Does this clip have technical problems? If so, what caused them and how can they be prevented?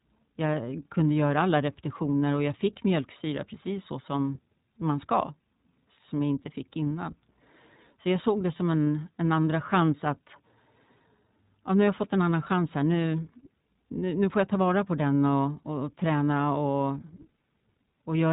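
Yes. Throughout, the speech has passed through the iLBC codec, which codes the excitation frame by frame with no carry-over between frames, here in 20 ms frames at about 15 kbps. Nothing above 3.8 kHz survives, and the damage is plainly audible: the voice sounds a little rough and synthetic. Prevent this by recording or transmitting with a wideband codec at a higher bitrate.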